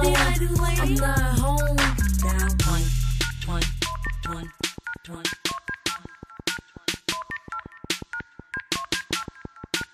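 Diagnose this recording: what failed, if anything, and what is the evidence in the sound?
A train of clicks runs from 4.07 s to 9.82 s. About thirty near-identical pulses arrive at a steady 5.6 per second, peaking around 5 dB above the sound and audible in gaps too. The regular spacing likely points to interference coupling into analogue wiring or a struggling interface.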